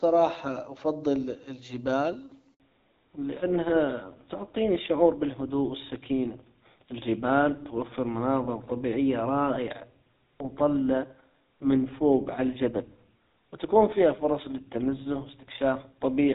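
At 2.54 s, just after "افضل الجبال", the speech cuts out in a handover gap. The call switched networks, and no speech frames arrived during the change. The sound fades within milliseconds. About 60 ms of silence follows until 2.60 s, and that moment is lost.

From 2.60 s to the end, there is a fallback to narrowband. Before it, the speech is clear, with light coding damage consistent with HD Voice near 12.65 kbit/s. After it, nothing remains above 4 kHz. The speech sounds duller and rougher, which fits GSM full rate at 13 kbit/s.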